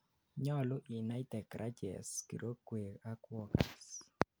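No technical faults can be heard anywhere in the speech recording.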